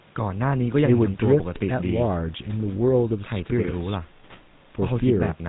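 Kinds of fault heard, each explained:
GSM full-rate codec: the speech is rebuilt from a vocal-tract filter driven by sparse, regularly spaced pulses, consistent with a 13 kbps coder, giving a plainly audible buzzy, gravelly roughness throughout. A spectrogram shows nothing above 4 kHz, with coarse, grainy harmonics.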